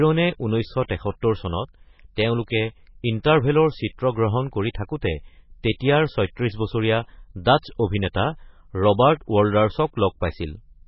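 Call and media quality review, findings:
Speech muffled and watery for the whole clip, nothing above 5.5 kHz. Likely MP3 compression, heavily starved, which fits a bitrate near 16 kbps: treble cut off, weak frequency lines flickering frame to frame, so sibilants swirl and onsets smear.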